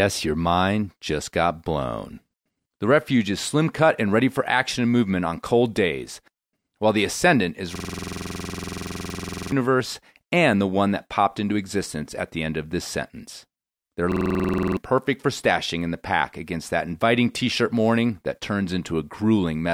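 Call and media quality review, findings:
System hang loop, 7.76–9.52 s: speech replaced by a 46.44 ms slice repeating at 21.5 Hz, a machine-gun stutter. Driver or OS stall; hardware kept replaying its ring buffer, which fits a 2048-sample buffer. About two seconds of speech lost.

System hang loop, 14.12–14.77 s, just before "perfect for stashing in": same 46.44 ms slice repeating at 21.5 Hz. Same stalled-driver mechanism and buffer size. Roughly 0.7 s of speech missing.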